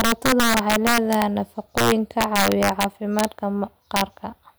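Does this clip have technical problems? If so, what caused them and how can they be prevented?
Yes. Integer overflow runs through the whole speech clip. The signal is driven about 5 dB past full scale. A small share of samples, around one or two percent, wrap to the opposite sign. Each loud peak becomes a violent crack, harsher than clipping. Prevent it by using saturating arithmetic or a limiter before conversion to integer.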